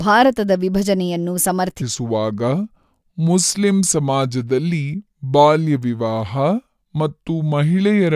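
From 1.82 s, after "ಭಾರತದ ವಿಭಜನೆಯನ್ನು", a wrong sample rate slows speech to 0.726 speed, about 5.5 semitones lower, consistent with 44.1 kHz audio played at 32 kHz; spectrogram harmonics compress downward, waveform stretches.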